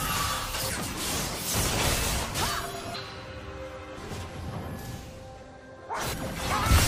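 At 0.69–0.71 s, 2.94–2.96 s and 6.12–6.14 s, damaged data in the compressed stream makes the decoder misread frames and resync, giving brief glitches. Each shows as a short break on a spectrogram and a discontinuity in the waveform.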